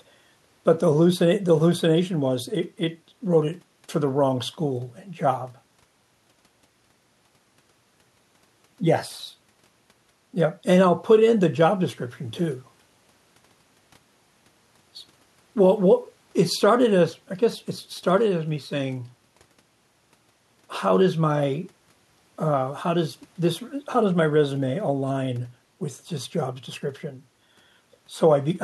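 No faults are audible anywhere in the recording.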